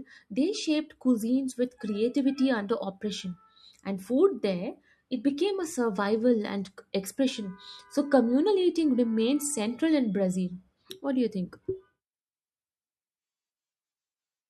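A speech recording with nothing technically wrong with it.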